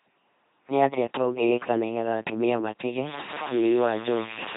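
Throughout the speech, an LPC-10 vocoder replaces the signal with a ten-pole vocal tract filter driven by either a pulse train or noise, a heavy reduction that points to about 2.4 kbit/s. The result is a buzzing, mechanical robot voice with nothing above 3.8 kHz.

From 3.07 s to the end, the audio turns grainy and harsh, with distortion that shifts with the sound. The likely cause is low bit depth without dither: truncation to very few levels, consistent with around 5 bits, leaves an error only about 15 dB below the signal.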